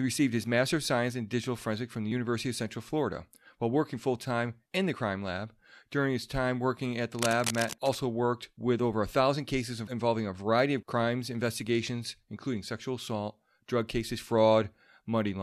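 At 2.12 s there is a tiny skip. It comes from an overlap between stream segments. Two pieces of the stream claimed the same short stretch of time. The player trimmed that stretch away, though the speech there was not repeated. A few milliseconds vanish and the waveform jumps. The segments appear to be 4 s long. The same fault returns at 14.10 s as another tiny skip.

From 7.19 s to 7.95 s, cable scratch noise sits over the speech. It is a dense, uneven rustle, roughly 10 dB below the speech. A worn cable, connector or control was likely moved at this point. Its contact resistance changed quickly and unevenly. Those changes became bursts of scratchy noise that stop when the movement stops.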